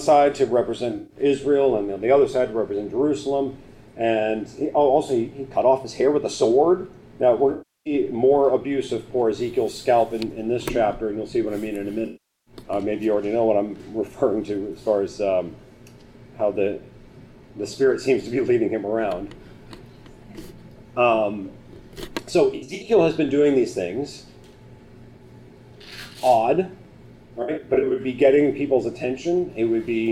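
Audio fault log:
0.97 to 1.17 s, AAC frame loss with concealment. About 128 ms of frames drop out. The decoder reuses the last good spectrum, so the sound smears into a brief noisy patch.
7.51 to 7.93 s, AAC frame loss with concealment. About 341 ms is lost. The patched spectrum decays toward silence, then fades back.
12.06 to 12.54 s, AAC frame loss with concealment. The longest gap, about 405 ms. It fades down and recovers.
22.55 to 22.91 s, AAC frame loss with concealment. Short losses are scattered, each run under about 70 ms. The result is short smeared patches.
27.42 to 28.01 s, AAC frame loss with concealment. Scattered losses over about 555 ms sound smeared.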